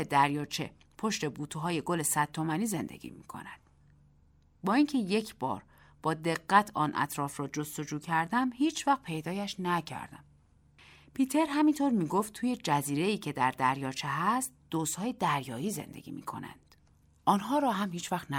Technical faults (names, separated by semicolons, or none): none